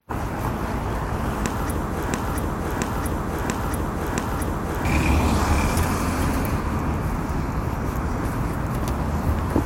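From 2.13 to 4.85 s, the stream likely stalled and resent its last fragment. The result is a broken-record loop: one 0.68 s piece repeats exactly four times, replacing the missing audio.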